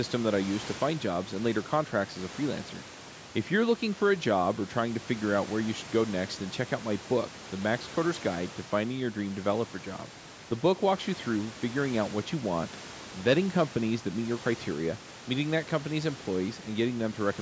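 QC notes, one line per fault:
No faults heard.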